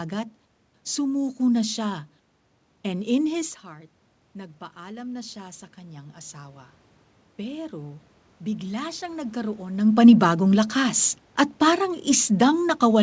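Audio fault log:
3.61–6.78 s and 7.46–9.72 s, automatic gain rising: Right after the talker backs off the mic around 3.5 s, the level drops by about 13 dB. The automatic gain control then slowly climbs about 5 dB to compensate, and later adds about another 4 dB. You can hear the voice and the room noise swell up together over a couple of seconds, because the gain stage lifts everything it receives, not just the speech.
9.87 s to the end, automatic gain falling: When the talker moves again around 9.5 s, the input becomes too loud for the gain applied. With all that boost still applied, the gain control sees it as too loud and starts backing off. So the voice comes in loud at first and then sinks gradually through the last few seconds, with the background noise dropping along with it.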